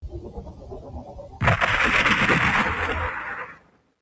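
A noise suppressor applied to music or sounds runs across the whole clip. Built for speech, it treats sustained tones, ambience and decaying tails as noise and keeps pulling its gain down and letting it back up, with the level swinging by roughly 15 dB. Sharp onsets survive, but held material and reverb sink beneath them, so the sound pumps and thins. The call microphone processing on the same path also leaves nothing above 8 kHz.

Sound cut by the noise suppressor is clearest from 0.02 to 1.42 s and again from 3.49 to 3.94 s. In these stretches the suppressor judges the audio to be noise and turns it down harder than elsewhere, by about 12 dB at the deepest point in the first span and about 13 dB in the second. Steady and fading parts drop out of focus and their decays end early, while sudden hits come through largely intact.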